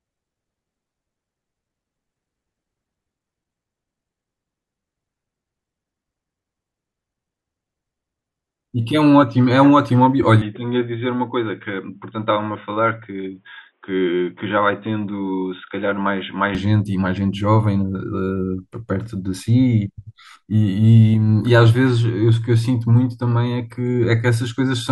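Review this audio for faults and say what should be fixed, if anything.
The recording input was likely switched to a poorer device from 10.42 to 16.55 s, then back. During that span the speech loses everything above 3.8 kHz and turns dull and boxy, drops to a slightly lower level, and carries a faint new background noise. The changeover is immediate in both directions, with no gap of silence. To prevent it, lock the capture device for the whole session and disable automatic input switching, including headset call profiles.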